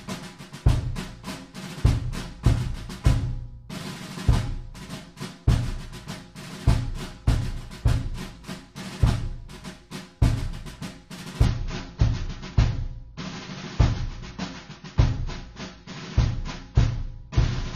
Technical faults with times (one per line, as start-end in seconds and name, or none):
11.45-17.75 adaptive stream at a lower bitrate